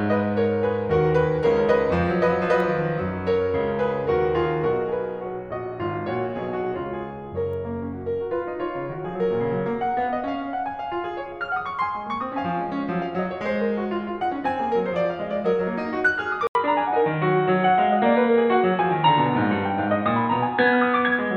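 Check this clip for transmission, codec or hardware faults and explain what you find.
One fault is present. At 16.47 s the input switched to a poorer device, likely another microphone or a headset call profile. After an 80 ms silence, the music loses everything above 4.1 kHz until the end, sounding dull and boxy, shifting in level by around 5 dB, and gaining a faint new noise floor.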